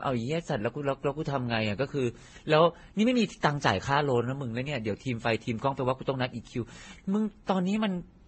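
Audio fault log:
Throughout, transcoding between lossy codecs: nothing sounds above 8.4 kHz, and several distinct coding textures are layered at once, likely from a low-rate Vorbis encode passed through MP3 and then WMA. A single low-bitrate encode would give one consistent artefact character, not this mixture.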